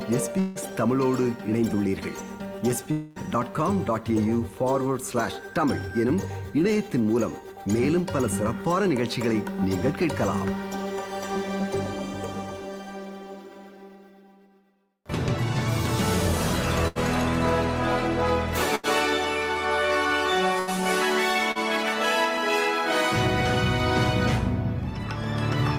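From 0.39 to 0.58 s and again from 2.91 to 3.19 s, a long network dropout likely interrupted the stream, losing about 160 ms and then 240 ms. Each time the receiver stretched the last sound into a fading buzz or hiss to fill the gap, and the audio then jumped ahead. In bursts of packet loss at 16.88 to 16.98 s, 18.75 to 18.86 s and 20.59 to 20.70 s, about 80 ms goes missing each time. Each is heard as a held buzz or fading hiss followed by a skip forward. At 21.51 to 21.58 s, short concealed packet loss removes 40 ms. The patched-in sound blends back into the real audio as a brief smear.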